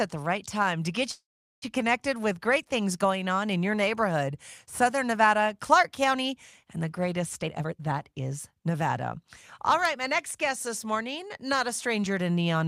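From 1.11 to 1.64 s the speech stops, a short buzz fades into about 0.4 s of silence, then resumes intact: a call audio freeze, likely from delayed packets emptying the jitter buffer. From 7.42 to 9.25 s the speech sounds hurried at unchanged pitch, running at 121% speed, and again more mildly from 9.71 to 12.20 s at 105%. This jitter buffer speed-up comes from the receiver trimming pitch-period slices to shed backed-up delay, around 0.4 s and then about 150 ms.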